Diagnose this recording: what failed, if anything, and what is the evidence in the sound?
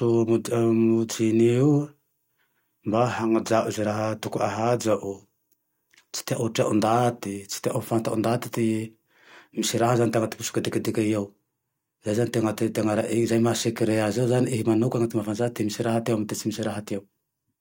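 Nothing failed; the speech recording gives no audible evidence of a fault at any stage of the chain.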